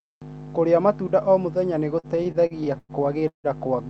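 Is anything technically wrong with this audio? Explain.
Yes. There are repeated stalls (stutter) from 1.99 to 3.47 s, just after "matunda o muthenya nĩ". Packets arrived late or too slowly, so the jitter buffer kept running dry. The receiver stretched the last sound to bridge each wait. That happens ten times across the span, filling about half a second in total. The longest gap is 163 ms, where the held sound fades. Nothing is lost, but a third of that stretch is filler. The speech drags and stutters. The call codec's top end stops near 8 kHz.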